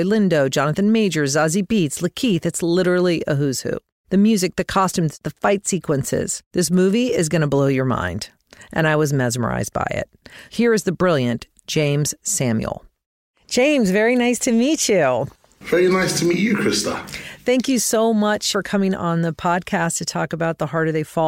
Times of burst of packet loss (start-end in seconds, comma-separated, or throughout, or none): none